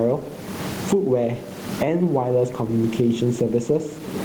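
Gain pumping runs through the speech: room noise, about 31 dB below the speech, swells in each pause and ducks under loud syllables, swinging around 20 dB. Likely cause: gain set far too high, with a fast limiter clamping every peak, squashing the dynamics.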